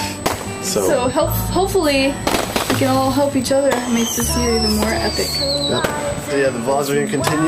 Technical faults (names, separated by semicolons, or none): USB whine